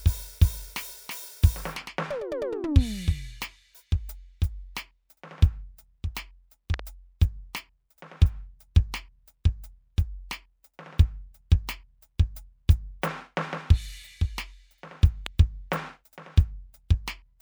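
A loud pop lands at 6.74 to 6.81 s as a quick double thump, then a single pop at 15.26 s, both far above the music, which keeps playing underneath. Unlike a dropout, nothing is lost. A voltage pulse, likely from a switch or static, was added.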